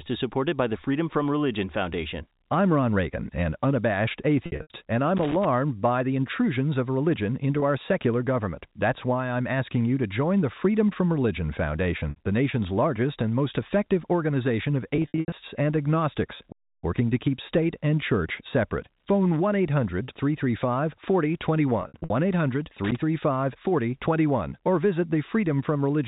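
Packet loss with pitch repetition appears at 4.46–4.70 s, 7.60–7.62 s, 12.10–12.16 s, 14.96–15.32 s, 20.04–20.08 s and 21.82–22.10 s. At each one the receiver fills the missing audio by repeating the last pitch period. The short gaps of 20, 40 and 60 ms sound like a brief buzzy hold. The longer clusters have 180 to 220 ms lost, spread over 240 to 360 ms, with runs of up to 80 ms. These stutter and fade before the sound returns.

Loose connector crackle occurs at 5.17–5.48 s and again at 22.84–22.99 s. An unstable contact repeatedly makes and breaks the signal path, producing irregular bursts of scratchy crackle.

At 16.52–16.84 s a playback stall, likely from the player running out of data, stops the sound for about 310 ms before it resumes. All of this sits on narrowband G.711 telephone audio.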